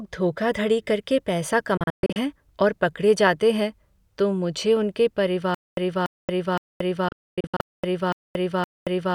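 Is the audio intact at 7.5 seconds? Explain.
No. A stutter with silent gaps runs from 5.55 s, just after "हैं तो मुझे उनके", to the end: a 288 ms fragment repeats every 0.52 s with 228 ms of silence between, likely a stalled stream replaying its last fragment.

A digital broadcast dropout also spans 7.08 to 7.60 s: the receiver mutes on bad data with 3 ms fades, leaving holes of up to 128 ms that total about 352 ms of lost sound.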